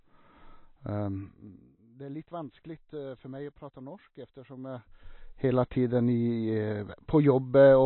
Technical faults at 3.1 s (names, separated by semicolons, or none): MP3 compression